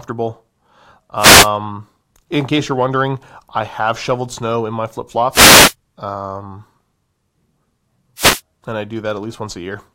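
Three wireless microphone noise hits: 1.17–1.50 s, 5.31–5.74 s after "snow in my flip", and 8.16–8.41 s before "and I". Each is a short swish of static as the FM radio link fades.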